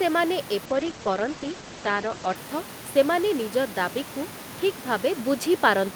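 A call bitrate drop runs from 0.66 to 2.41 s. The speech turns coarse and muffled, with the top end cut to about 8 kHz, which fits the encoder falling from roughly 64 to 11 kbps. A sudden gain jump at 5.19 s lifts speech and room noise together by about 4 dB until the end, likely from a gain setting applied without any ramp.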